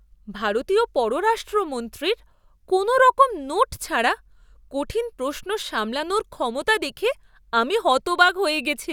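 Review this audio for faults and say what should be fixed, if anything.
No faults; nothing needs fixing.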